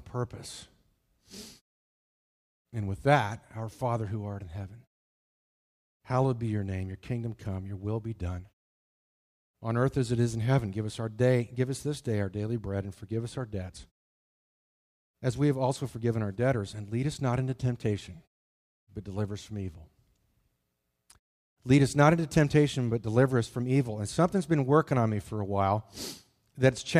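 No technical faults are present.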